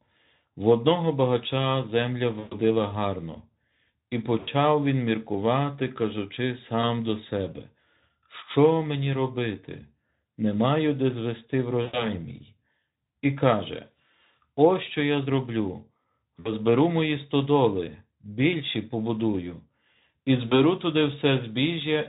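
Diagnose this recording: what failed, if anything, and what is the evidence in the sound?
Network stage: VoIP packet loss concealed by the speech codec at 2.39–2.57, 4.39–4.49, 6.82–6.84, 11.82–12.09, 16.39–16.52 and 20.48–20.57 s. The Speex decoder extrapolates from its last frame, so the speech stretches into a buzzy tone or a coloured noise that fades. On a spectrogram the harmonics run flat and smeared, and the waveform envelope decays.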